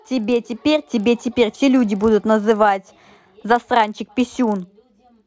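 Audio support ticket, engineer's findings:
Resampler restarted on every block: 44.1 kHz to 16 kHz conversion run per 40 ms block, no state carried across edges, so each boundary gets a small interpolation error. Result: steady 25 Hz tick/buzz under the speech, throughout, present only with signal.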